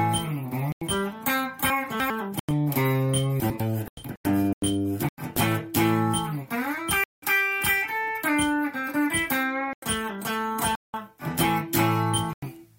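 Eight abrupt silent holes run through the audio, the signature of corrupt frame muting: damaged compressed frames were rejected by the decoder and replaced with silence. They fall at 0.71–0.81, 2.39–2.51, 3.88–4.62, 5.09–5.43, 7.04–7.23, 9.61–9.83, 10.73–10.94 and 12.25–12.48 s. The longest, about 0.74 s at 3.88 s, points to a run of several frames dropped together. Unlike a dropout that fades or repeats material, each gap cuts in hard and leaves pure silence, and the sound resumes on time afterwards. Two short passages show chunks out of order. Between 1.7 and 2.1 s, a 100 ms chunk plays three chunks late, and between 3.4 and 3.6 s, another arrives one chunk late. These spots sound jumbled, but nothing goes silent. The audio is all there, just reordered, which separates them from the muted holes.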